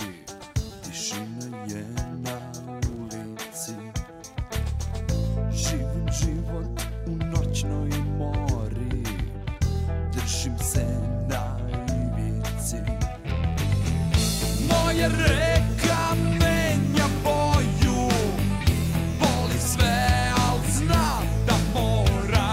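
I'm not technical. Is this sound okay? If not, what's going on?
Yes, this sound is okay, and there's nothing going on with it that you need to worry about.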